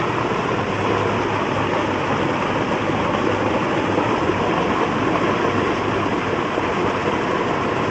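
Nothing goes wrong anywhere in these everyday sounds as far as I can hear; they came over a call link whose top end tops out around 8 kHz, which fits an Opus codec set to that bandwidth, and that's just how the link was configured.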